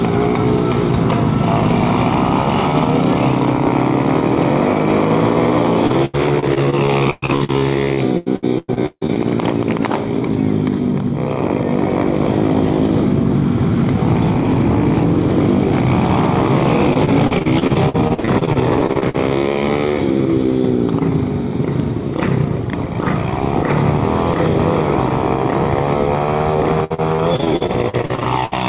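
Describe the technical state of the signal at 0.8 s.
At 0.8 s the signal is intact, with nothing there beyond the narrowband sound of the call path, which carries nothing above 4 kHz.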